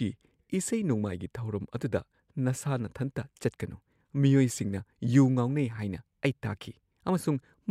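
No technical faults can be heard anywhere in the recording.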